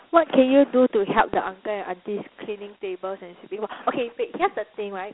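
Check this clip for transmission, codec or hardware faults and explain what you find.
One codec fault runs through the whole clip. It is Dialogic VOX ADPCM. Each sample is squeezed into a 4-bit step from the last, which fits a 32 kbps stream. The sound sits in a 250 Hz to 3.4 kHz band, nothing above 3.9 kHz, with plainly audible gritty hiss riding the speech.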